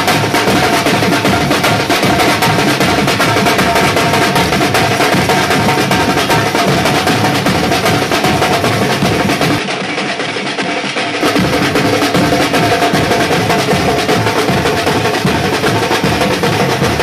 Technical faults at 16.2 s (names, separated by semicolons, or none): none